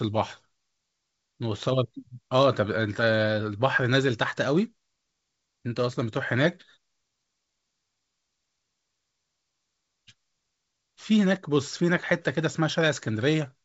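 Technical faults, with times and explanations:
No technical faults heard.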